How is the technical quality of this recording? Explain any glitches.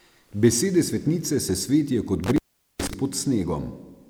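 The speech has one clear glitch. An intermittent contact occurs from 2.24 to 2.94 s, right after "svetnice se svetijo kot". A loose connection briefly opens, cutting the sound for about 0.42 s, with crackle at each edge and faint hiss in between.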